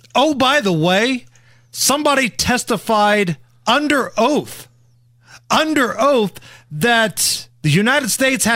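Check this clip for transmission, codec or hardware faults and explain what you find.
No faults heard anywhere in the speech, so there is nothing to flag.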